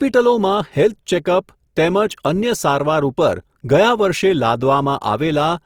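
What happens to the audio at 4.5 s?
Opus compression damage is audible at 4.5 s, as it is across the whole clip, and it likely comes from that codec. With too few bits, each band's energy is kept but its fine detail is filled by folding lower bands or with noise, so the speech sounds rough, grainy and noisy rather than swirly. The bandwidth stays full, reaching about 20.2 kHz, which fits the music mode at a low rate near 24 kbps.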